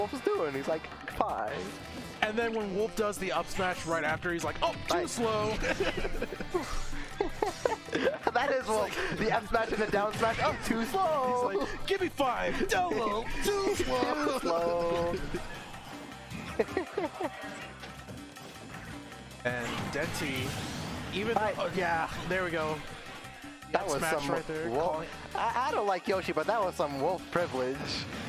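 No technical faults can be heard anywhere in this recording.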